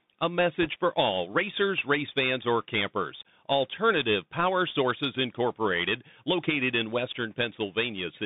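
From start to end the speech carries the sound of a Bluetooth CVSD headset codec. The band stops near 150 Hz at the bottom and 3.7 kHz at the top, consistent with a 64 kbit/s one-bit delta stream. Because each sample only steps up or down, loud high-frequency sounds outpace the adapting step, so s sounds turn scratchy and a fine granular hiss sits under everything. That hiss and slope distortion set it apart from ordinary telephone band-limiting.

Between 0.62 and 0.68 s, just before "for all racers race", bit errors on a Bluetooth voice link add a brief rushing crackle, at a rate of roughly one to two percent. Each flipped bit nudges the waveform by one step, whose size grows with the speech level, and the error fades as the step size recovers, so there are no sharp loud clicks. That soft spray of noise distinguishes it from packet loss or digital dropouts, which gap or click.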